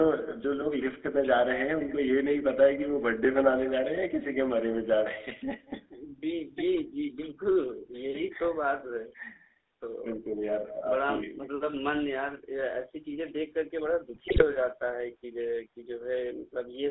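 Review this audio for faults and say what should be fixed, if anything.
With no echo canceller at the far end, its loudspeaker output leaks into its microphone and returns across the network. Throughout the speech, every phrase is trailed around a fifth of a second later by a thin copy about 18 dB quieter. Enabling acoustic echo cancellation on the far-end device, or having that side use a headset, would remove it.

The whole call passed through the GSM full-rate codec, which rebuilds the voice from a vocal-tract model driven by a coarsely sampled pulse excitation. That gives a plainly audible buzzy, gravelly roughness, with the band confined to roughly 250 Hz to 3.7 kHz, consistent with a 13 kbps stream. The microphone processing's bass roll-off is separate and normal. Carrying the call over a wideband codec such as AMR-WB or a VoIP codec would avoid this damage.

GSM bit errors hit from 14.14 to 14.45 s, where corrupted filter, pitch and gain parameters reached the decoder. 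The speech breaks into squawks, pops and a gargling burst, which points to about fourteen damaged 20 ms frames. A stronger radio link, or error concealment that mutes bad frames, would prevent it.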